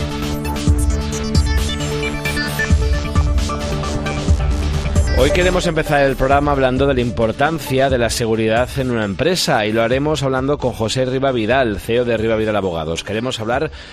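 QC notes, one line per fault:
Throughout: MP2 compression damage. The top end sounds dull and closed in. A gurgling, granular roughness sits under the sound, and upper detail flickers in and out. This likely comes from MPEG Layer II encoding at a low bitrate. The codec splits the signal into 32 sub-bands and shares out bits. With too few bits, high bands switch off and the rest are coarsely quantised. The strength of the damage fits a rate around 80 kbps.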